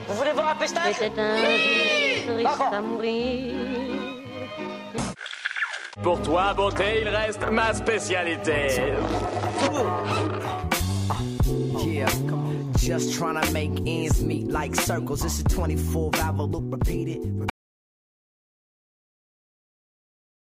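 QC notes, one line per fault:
17.50 s to end: audio dropout to silence, the sound cuts off abruptly into silence with no room tone, likely from the input being lost while recording continued.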